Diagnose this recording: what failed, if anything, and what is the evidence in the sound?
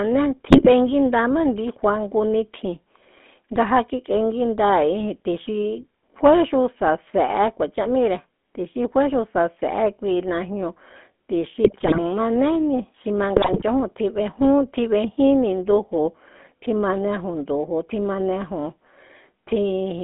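The codec stage is at fault throughout: the speech has the buzzy, gravelly roughness of GSM full-rate coding and no content above 3.5 kHz. The vocal tract is modelled and driven by coarsely sampled pulse excitation, which fits a 13 kbps rate.

The network stage is at fault with GSM bit errors at 0.48–0.69 s, 11.64–11.99 s and 13.36–13.63 s, where the speech breaks into squawks, pops and gargling. Corrupted filter, pitch or gain parameters distorted the decoded spectrum and level frame by frame.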